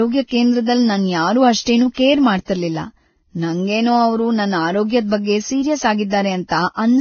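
Throughout the speech, nothing is heard above 6.5 kHz, and two distinct kinds of codec smearing overlap. This is likely transcoding between lossy codecs: a very low-bitrate Vorbis-style warble that a WMA-style stage then re-encodes. A single lossy codec would leave only one artefact character.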